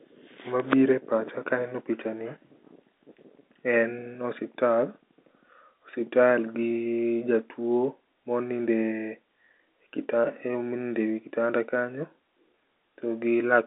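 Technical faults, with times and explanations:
No technical faults; the speech runs over G.711 A-law telephone coding at 64 kbps, with the line band spanning roughly 250 Hz to 3.7 kHz and nothing above 3.8 kHz, as that format dictates.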